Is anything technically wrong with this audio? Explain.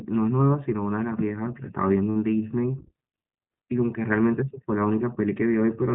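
Yes. The speech has two faults.

The iLBC codec colours the whole clip. Nothing above 4 kHz survives, and each frame's excitation is coded independently, giving a plainly audible rough, slightly synthetic texture. That roughness is what separates it from a simple low-pass filter, and it fits iLBC's 20 ms, 15.2 kbps mode.

From 2.10 to 2.17 s, lost iLBC frames leave a 60 ms hole, which fits three frames. The decoder fills it by repeating the last pitch cycle blended with noise, so it sounds like a brief held, buzzy vowel rather than silence or a click. The voice returns almost at once afterward.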